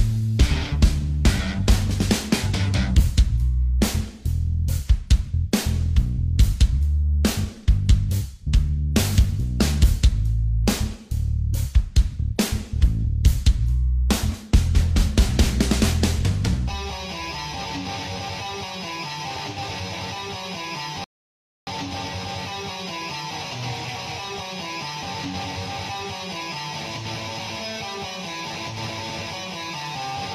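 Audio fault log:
21.04–21.67 s, rebuffering stall: the player used up its downloaded audio and halted playback until more data arrived, so the sound cuts abruptly to silence for about 0.63 s and then picks up exactly where it left off. Because playback simply paused and resumed from the same point, no audio is skipped or repeated. The clip is stretched by that gap, which is heard as a sudden hole rather than a glitch.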